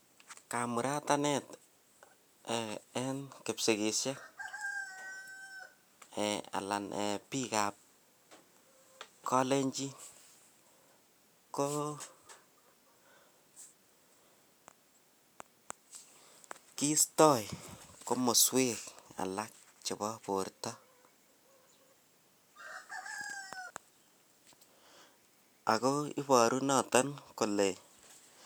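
No technical faults are audible anywhere in the speech recording.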